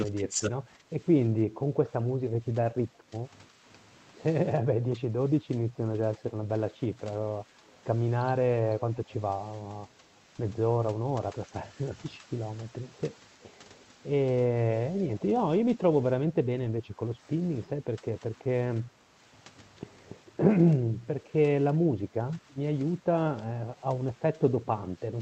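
The speech dips in level from 0.05 to 3.63 s and again from 4.62 to 7.5 s. The deepest drops reach about 10 dB. The first stretch loses around two seconds in total, the second about one. This is speech suppressed in double talk, likely caused by both sides talking at once. The echo canceller could not tell this talker from the loudspeaker echo. So it turned everything down. The voice sinks and thins in pieces.

From 7.67 to 7.76 s a faint delayed copy of the voice slips through. It trails the original by 326 ms, at about 35 dB below the speech. This is an echo leak. The far side's echo canceller likely failed to remove all of what its microphone picked up off the loudspeaker. The remnant came back as a brief, quiet scrap.

The same double-talk suppression returns from 11.02 to 12.29 s, at 13.35 to 13.4 s, from 16.26 to 19.14 s, from 20.76 to 23.6 s, and from 24.35 to 24.88 s. The short events are shallow, about 5 dB, and last only a fraction of a second. 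The two longer ones drop about 10 dB and eat roughly a second each.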